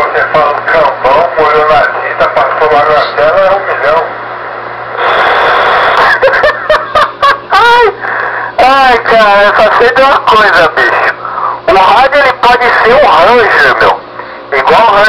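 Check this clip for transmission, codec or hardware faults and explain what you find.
No transmission, codec or hardware fault can be heard anywhere in the clip; the signal stays continuous and stable at every point.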